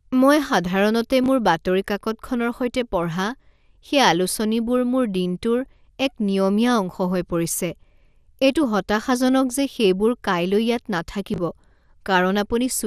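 Throughout the speech the top end sounds dull and thin, with a granular, gurgling roughness. This is likely MP2 compression at a rate around 80 kbps, where upper sub-bands are switched off and the remaining bands are coarsely quantised. The damage is steady across the clip, unlike a brief dropout.

At 1.24 to 1.28 s, chunks out of order: a 20 ms piece of audio plays one chunk late, after the piece that should follow it. The result is a tiny jumbled stutter at the hard joins. Nothing is missing, which separates it from a gap or dropout.

At 5.66 to 5.73 s, DAB burbling: bit errors at a low rate, a fraction of a percent, get past error correction into the MP2 data. Wrong samples put short blips of noise in single sub-bands, laid over the speech, not a reordering of the sound.

At 11.34 to 11.38 s the chunks out of order fault comes back in the same form: one 20 ms chunk arrives one place late. 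It gives the same brief garbled flicker, and none of the noise blips heard in the burbling.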